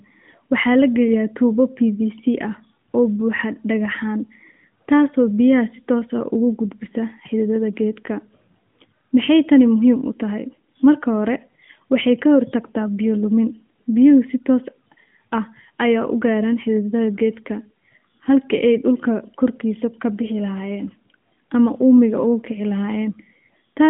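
No technical faults are audible in this recording.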